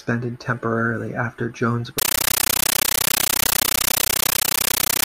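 Speech runs cleanly until just after "temporarily after", when at 1.98 s a compressed stream played as audio takes over until the end at 5.06 s. Undecoded AC-3 data, which fits a 640 kbps stream, is treated as samples, giving loud chattering static: 13.3 ms noise bursts repeating 31.25 times a second.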